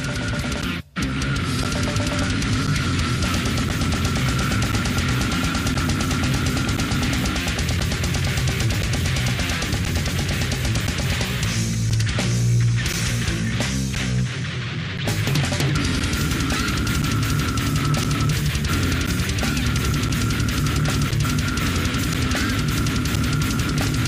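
From 0.62 s to 23.17 s, periodic USB or driver dropouts recur every 1.024 s. A stalled audio path swaps around 10 ms of sound for silence, about twenty ticks in all. Their clock-like spacing, heard only over signal, sets them apart from random clicks.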